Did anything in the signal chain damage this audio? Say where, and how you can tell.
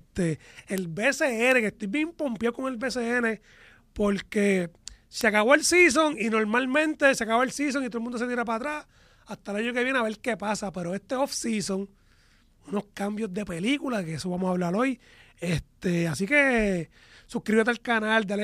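Yes, at the digital link between two devices: word clock ticks from 0.78 s to 17.77 s, about twenty sharp clicks roughly every 0.7 s. The receiver's free-running clock drifts a few tens of ppm from the sender's, so each slip drops or repeats a single sample.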